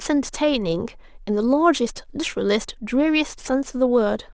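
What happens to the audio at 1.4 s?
Aliasing runs through the whole clip: speech content above 8 kHz folded back down, fitting a drop to 16 kHz without filtering, leaving gritty, metallic sibilants, with the folded content about 25 dB below the signal.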